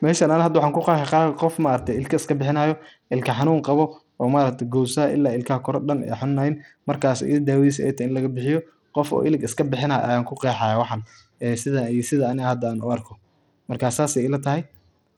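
Throughout, the speech carries Bluetooth SBC compression damage: treble flickers out, gritty quantisation noise rides along, and the spectrogram shows ragged, gapped upper bands, likely from a starved bit pool near 80 kbps.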